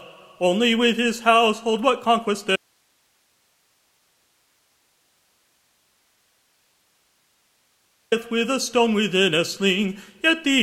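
At 2.56 s the sound cuts out abruptly, mid-flow, and for about 5.56 s nothing remains but a steady hiss sitting roughly 45 dB below the normal level, until the audio snaps back at 8.12 s. This is an audio dropout to a faint residue: the wanted signal was most likely lost upstream while the path after the break stayed live, so its noise floor carried through the gap instead of true silence or a fade.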